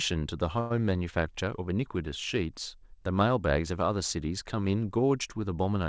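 Speech, carried over a call path whose sound stops at 8 kHz, in keeping with a wideband codec such as G.722. From 0.60 to 0.72 s the sound stalls into a brief buzzy smear for about 100 ms, then picks up exactly where it left off with nothing skipped. This is a call audio freeze, likely from delayed packets draining the jitter buffer, so the receiver stretched the last sound and everything after arrives 102 ms late.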